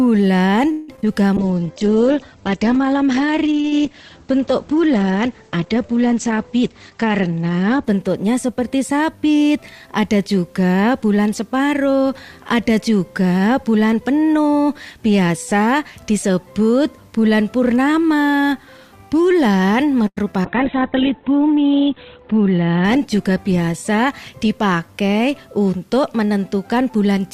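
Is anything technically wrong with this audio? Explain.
Yes, there's a cluster of network-type problems near the start, a patch of repeated packet loss around 20 s, and two long stretches of low-bitrate coding.

From 0.71 to 0.90 s there's a call audio freeze. The last sound gets stretched out for about 168 ms before playback resumes where it left off, so nothing is lost, but everything afterwards now runs that much later. The likely cause is that packets stalled in transit and the jitter buffer ran dry, leaving the receiver to improvise until they arrived.

Right after, from 0.96 to 0.99 s, there's a short concealed packet loss. About 20 ms never made it to the decoder in time, so the receiver extrapolated from the previous sound and crossfaded back in. You hear it as a tiny smear or wobble.

Then a skip ahead at 1.01 to 1.04 s. Later audio was already queued, so playback jumps forward and drops something like 70 ms. 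The two sides butt together almost seamlessly, just a sense of something clipped out. It also claws back some of the delay the freeze added.

A call bitrate drop runs from 1.37 to 9.57 s. The encoder was pushed from 64 kbps down to 10 kbps, and it sat at the bottom for about 6 s. At that rate Opus codes coarsely and narrows the band from 20 kHz to 8 kHz, so the audio goes dull, rough and a bit watery. The second drop, 20.46 to 25.40 s, is harsher: down to 8 kbps with bandwidth cut to 4 kHz, bottoming out for about 1.4 s. That one is properly muffled and grainy.

There's a jitter buffer slow-down at 1.43 to 1.73 s. The buffer wanted more reserve, so the receiver repeated short pitch-period chunks over and over, adding 57 ms. Playback runs at about 83% speed with the pitch unchanged, so things sound drawn out, maybe with a faint warble.

Jitter buffer speed-up happens twice, at 6.62 to 8.03 s at about 112% and at 22.16 to 22.97 s at about 110%. 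Here the buffer held too much, so the receiver trimmed tiny pitch-length slices repeatedly, removing roughly 150 ms and 100 ms respectively. The pitch holds, but the timing feels hurried.

Finally, 20.07 to 20.34 s has repeated packet loss. Three separate gaps land close together, the longest 92 ms, and about 41% of that stretch is concealment rather than real audio. Each patch extends the last sound before the next hole arrives, giving a choppy texture with bits missing.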